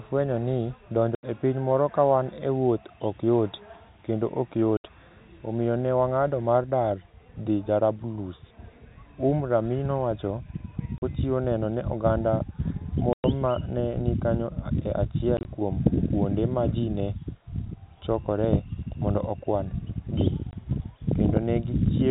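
Packet loss filled with silence cuts hard-edged gaps at 1.15 s (80 ms), 4.77 s after "ok yot kendo ok" (70 ms), 10.98 s before "neno ne oganda" (40 ms), 13.13 s before "ma ne ni kanyo" (110 ms), 15.37 s (50 ms scattered over 80 ms) and 20.51 s (20 ms). All are multiples of 10 ms, which fits 10 ms packets.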